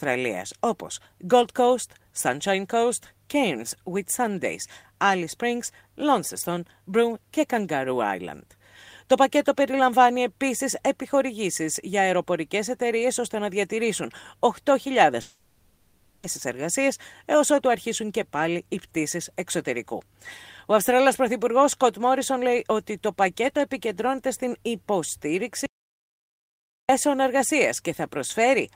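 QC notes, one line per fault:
15.21–16.25 s, long network dropout: For about 1.02 s the sound smears into a fading buzzy hiss instead of continuing. The gap is concealed for its full length, with no silence. This is likely a stream interruption where the receiver extended the last audio. The original material is lost.
25.66–26.89 s, audio dropout to silence: The sound cuts off abruptly into about 1.23 s of silence, with no room tone underneath. It then resumes mid-flow. This likely comes from the input being lost while the recorder kept writing silence.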